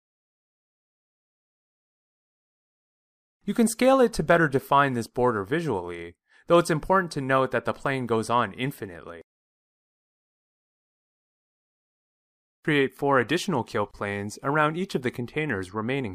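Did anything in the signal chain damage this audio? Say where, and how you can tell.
Yes, there's a gap at a join of encoded pieces, about 26 ms long, starting at 13.91 s. The sound drops out mid-flow and then resumes right where it left off, which is the giveaway that it's a codec-stage splice. Separately encoded chunks were stuck together untrimmed, so the encoder's start-up delay on one side and last-frame padding on the other ended up inside the audio, with the codec softening the edges of the hole.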